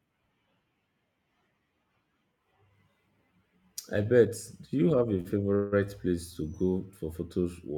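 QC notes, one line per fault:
5.20–5.27 s, short stall from a late packet: just after "you have a" the speech hangs for about 46 ms, with the last sound drawn out and a faint buzzy flatness before it picks up again. A packet missed its slot, the jitter buffer emptied, and the receiver stretched what it already had until the packet turned up. Playback then continued from the same point. Nothing is lost, but everything after runs 46 ms later.
5.55–5.74 s, call audio freeze: again after "you have a", the sound is held for about 168 ms as a buzzy continuation of the last fragment. It never drops to silence before the speech carries on. The likely cause is packets delayed in transit, which drained the jitter buffer and left the receiver padding the gap from the last audio it had. Speech resumes where it stopped, so nothing is missing, but a further 168 ms of delay is added.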